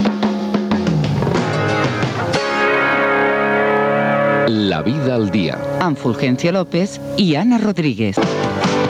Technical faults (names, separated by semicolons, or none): gain pumping